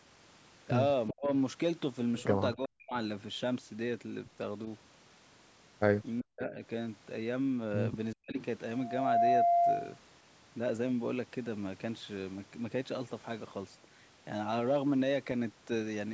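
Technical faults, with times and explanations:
1.1–1.28 s, 2.55–2.95 s, 6.21–6.62 s and 8.14–8.37 s, speech suppressed in double talk: The likely cause is both ends talking at once, so the echo canceller could not tell the near talker from the loudspeaker echo and pulled the whole signal down. Each time, the speech sinks by roughly 40 dB for a fifth to two-fifths of a second. It drops away and then returns, instead of fading naturally.
8.41–8.45 s, echo leak: The far end's echo canceller likely failed to remove everything its microphone picked up from its loudspeaker, so a bit of the signal was sent back. It arrives about 395 ms after the original, sitting about 20 dB below the speech. It is heard as a brief, faint, delayed scrap lasting only 40 ms.
8.73–9.99 s, loudspeaker feedback squeal: A microphone was picking up the loudspeaker it feeds, and at 693 Hz the loop gain went above one, so that frequency kept re-amplifying itself. 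It is heard as a single steady tone that swells over roughly 0.4 seconds into a squeal. It peaks around 10 dB above the rest of the signal and then holds until about 9.99 s.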